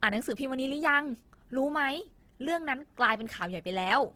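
Across the whole speech clip the band reaches about 20.2 kHz, yet the artefacts of the first encoding remain, likely low-bitrate audio saved at a high bitrate, pointing to a roughly 16 kbit/s Opus first pass.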